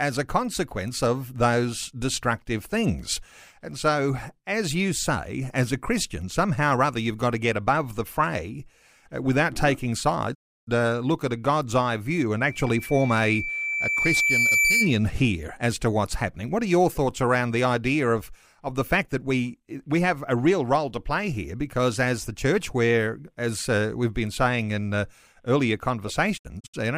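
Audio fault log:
10.33–10.69 s, digital broadcast dropout: right after "fray uh without taking" the sound fades to silence within about 20 ms and returns at "uh look at a", leaving a 320 ms gap. The receiver muted on bad frames, and the gap's length fits ten lost frames of about 32 ms. Unlike an analogue fade or a cable fault, it has no hiss, crackle or gradual weakening, only a clean, brief mute. The programme does not resume where it stopped, because what was sent during the gap is gone.
12.38–14.98 s, loudspeaker feedback squeal: after "eye view" a single tone at 2.3 kHz rises over about two seconds until it sits several decibels above the speech, then stops before "here as to what's". A microphone was picking up its own loudspeaker, and the loop gain passed unity at that one frequency. A steady interfering whistle holds one level, but this tone grows on its own, and the growth is what marks it as feedback.
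26.36–26.79 s, digital broadcast dropout: after "saying in uh earlier" the sound breaks into several short holes spread over 384 ms instead of one mute. About 160 ms is missing in total, and the longest hole is 64 ms. Each hole fades over about 20 ms. The pattern points to a weak signal that kept losing and regaining lock, roughly five frames failing. The clean edges and silent gaps tell it apart from crackle or packet-loss concealment.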